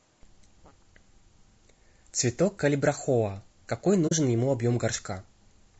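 Throughout the speech there is plainly audible codec damage, most likely from low-delay AAC compression such as AAC-ELD. The short frames resolve pitch harmonics poorly, so the voice turns rough and grainy. That graininess, rather than the watery swirl of other low-bitrate codecs, fits AAC-ELD, here at 32 kbps.

From 4.07 to 4.12 s comes AAC frame loss with muting: about 40 ms, roughly two frames, drops out. The decoder zeroes the missing spectrum and overlapping windows fade the sound out and back in, giving a soft-edged hole.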